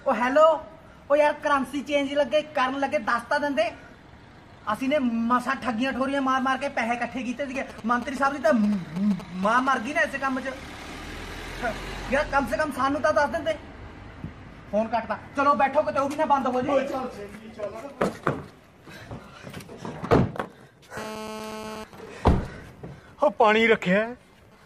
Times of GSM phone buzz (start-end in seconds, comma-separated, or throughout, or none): 20.97-21.84